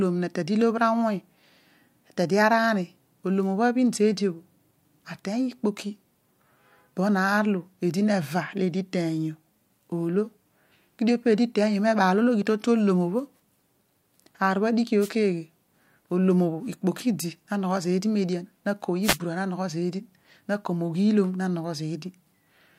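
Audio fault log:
15.00–15.10 s and 19.02–19.18 s: wireless microphone noise hit, two short bursts of static lasting about 0.1 s and 0.17 s. The analogue FM radio link from the microphone faded as reflected copies of the signal cancelled at the receiver. With the carrier weakened, receiver noise rose abruptly into a swish. It cleared as soon as the signal recovered, which is why each hit is so brief.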